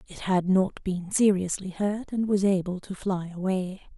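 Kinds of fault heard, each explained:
Nothing stands out as a fault here; the speech comes across steady and intact with no dropouts, glitches or distortion to flag.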